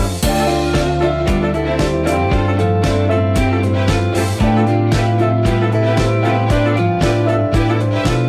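No technical faults can be heard anywhere in the audio, and the signal stays steady and intact throughout.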